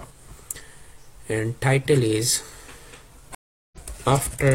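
At 3.35 s a stream reconnect drops the audio to silence for 376 ms, showing as a blank gap in the waveform and spectrogram. The sound then resumes roughly 0.4 s further along.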